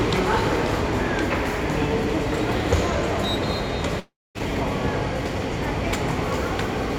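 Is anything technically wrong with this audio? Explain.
Yes. A long network dropout runs from 3.99 to 4.38 s: the last sound continues as a fading buzz, then about 240 ms of near-silence follows. The likely cause is a stream gap where the receiver stretched old audio before resuming, with about 360 ms lost.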